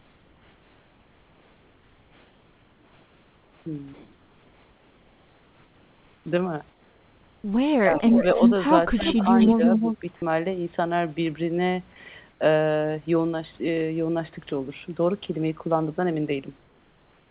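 Speech, with comfort noise in place of the background in the pauses from 0 to 3.66 s, 3.94 to 6.26 s, 6.70 to 7.44 s, 12.30 to 12.40 s and 16.58 to 17.27 s. The real room noise gives way to a smooth, featureless hiss about 2 to 5 dB quieter. The sender likely stopped transmitting in the pauses, and the receiver filled the gap with synthetic noise. Speech is suppressed in double talk from 7.83 to 8.02 s, dipping roughly 15 dB, and from 8.95 to 10.03 s, dipping about 10 dB. The echo canceller likely could not separate the talker from the far-end echo and turned both down. An echo leak is heard at 7.95 to 8.24 s, 8.98 to 9.55 s and 9.76 to 9.98 s. A copy of the voice returns 0.32 s late, about 5 dB below the speech. This is likely residue a loudspeaker-side canceller failed to remove. Nothing is heard above 4 kHz, as expected from a narrowband call codec.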